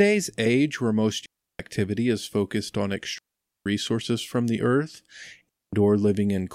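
Digital wireless dropouts at 1.26–1.60 s, 3.18–3.66 s and 5.49–5.73 s: the receiver loses too much data and mutes, leaving clean near-silent holes of 0.34, 0.47 and 0.24 s without noise bursts.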